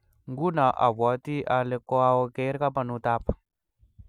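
No technical faults are audible.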